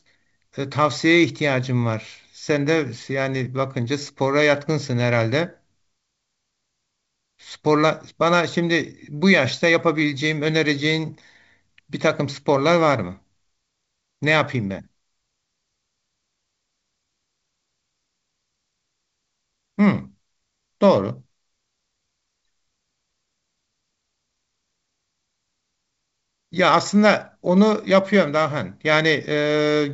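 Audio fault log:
No faults are present in this speech clip. The G.722 wideband telephone coding is audible as a ceiling at about 7.7 kHz with at most a faint upper-band hiss, which fits its 64 kbit/s mode.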